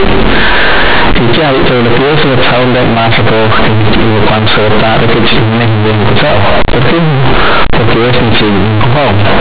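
Throughout the speech, companded audio is read as linear: mu-law bytes play as raw 8-bit samples. Quiet passages blast as loudly as peaks, producing harsh buzzing and heavy noise in pauses.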